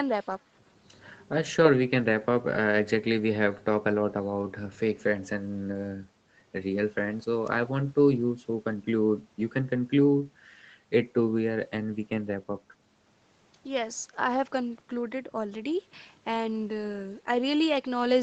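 No technical faults are audible.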